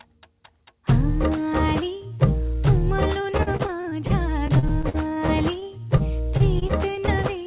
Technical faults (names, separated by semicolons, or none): repeated packet loss (robotic sound)